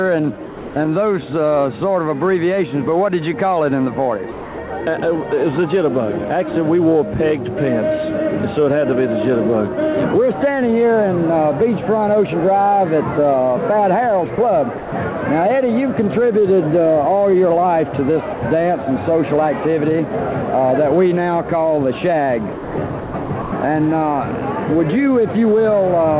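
Sound dropped by the voice detector occurs at 0.46–0.76 s, 14.36–14.38 s, 14.78–14.92 s and 18.34–18.42 s. Each is one clean gap filled with steady comfort noise, likely because the sender's detector mistook quiet sound for background. Sound chopped by the voice detector, at 4.32–4.7 s and 22.52–23.52 s, is different because the sending switches off and on repeatedly within the stretch. The audio stutters, likely from the same detector toggling. Throughout, the G.711 mu-law call path leaves nothing above 4 kHz.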